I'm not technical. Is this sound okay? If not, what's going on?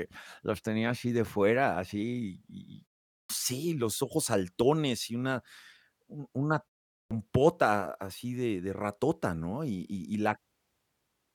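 No. There is a clipped start after a pause, twice: at 3.15 s and at 6.96 s, each after a short silence of about 0.35 s. The playback device goes to sleep in that quiet moment and needs time to wake, so roughly the first 0.15 s of the next speech is lost and the words jump in already underway. Ordinary muting in pauses only hushes the background and loses no speech.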